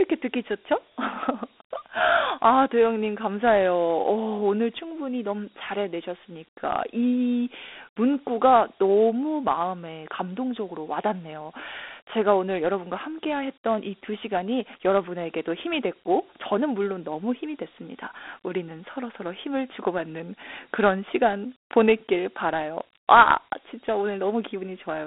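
From the first second to the end, this speech carries the sound of Dialogic VOX ADPCM, the old OKI-style 4-bit coding used for phone menus and voicemail. The band sits roughly between 250 Hz and 3.6 kHz, with nothing above 3.8 kHz, which fits 4-bit samples at 8,000 a second, around 32 kbps. Each sample is coded as a coarse step from the last, so a gritty hiss rides along with the speech and the damage is plainly audible.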